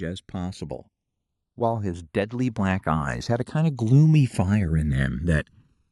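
A slow, sweeping flange colours the speech from the start and runs throughout the clip. This is channels drifting apart: the two channels run on separate clocks, off by around 200 parts per million, so their offset creeps to under a millisecond and mono-summed comb notches glide through the spectrum.

From 1.55 s to 4.95 s, voice and background swell together, ending about 12 dB louder. This is automatic gain rising: the gain control judged the input too quiet and raised its gain gradually over those few seconds, lifting everything at once.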